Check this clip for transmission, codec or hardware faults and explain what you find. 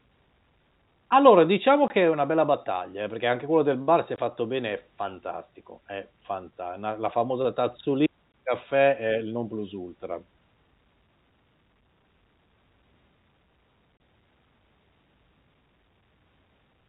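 Yes, there is one fault: packet loss filled with silence, heard as four brief gaps. At 1.88–1.90 s, just before "è una bella battaglia"; at 4.16–4.18 s, between "del bar se è" and "fatto bene è fantastico"; and at 8.32–8.34 s, before "caffè è il non", the speech drops out for 20 ms. At 13.99 s the hole is about 30 ms. Lost packets were replaced with silence, leaving abrupt edges. The 20 and 30 ms lengths suggest 10 ms packets. The G.711 telephone coding is working normally, limiting the sound to below 4 kHz.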